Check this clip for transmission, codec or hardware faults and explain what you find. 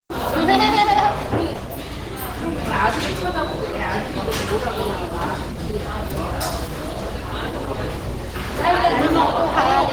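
One fault runs through the whole clip: Opus compression, at a level that is plainly audible.

Throughout, tones sound grainy and rough rather than clean. There is a hoarse, muffled edge with little of the swirling typical of MP3. This likely comes from Opus running in its hybrid mode, which fits a low rate near 16 kbps. Starved of bits, the encoder keeps each band's energy but fills in detail with noise. Bandwidth stays full, with content up to about 20.2 kHz.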